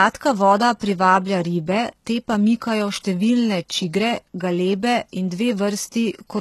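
HE-AAC compression runs through the whole clip, from start to finish. The speech has no content above about 12.3 kHz, and its upper band sounds synthetic: the treble seems to be rebuilt by copying lower bands upward, so its harmonics fail to line up with the coded lows. The s sounds come out gritty and metallic. The damage is plainly audible, which points to a very low bitrate, likely around 16 kbps.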